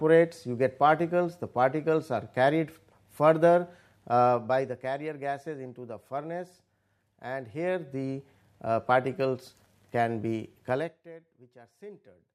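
From 4.24 to 4.82 s and again from 10.68 to 11.06 s, zipper noise appears as the level drops by roughly 10 dB and then roughly 25 dB in coarse, unsmoothed steps about fifty times a second. This makes a fast ticking that rides on the sound. The waveform envelope descends in a staircase, and a spectrogram shows faint vertical broadband lines at each step.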